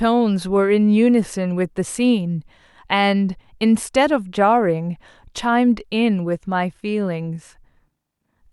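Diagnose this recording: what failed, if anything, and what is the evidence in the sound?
Nothing failed, and nothing in the sound points to a fault at any stage of the recording chain.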